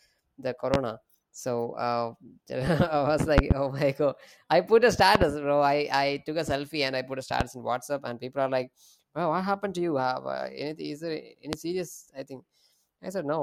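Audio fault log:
0.74–0.77, 3.38–3.54, 5.15–5.25, 7.41–7.44, 11.53–11.56 s, loud pop: sharp pops, doubled at 3.38 and 5.15 s, peak about 20 to 25 dB above the speech. A voltage pulse, likely from a switch, static or driver glitch, is added while the speech continues underneath.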